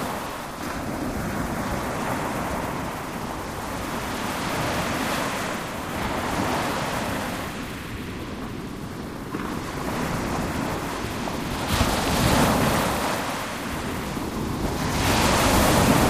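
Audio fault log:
No technical fault can be heard anywhere in this recording of sounds. Nothing in it calls for an entry in this log.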